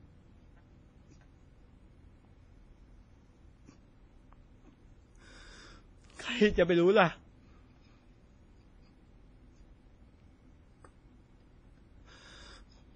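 From start to finish, nothing sits above about 9.9 kHz, and the speech carries two layers of swirly, smeared coding artefacts. That's likely transcoding between lossy codecs: it fits a roughly 32 kbit/s WMA pass re-encoded to Vorbis near 26 kbit/s, each adding its own damage.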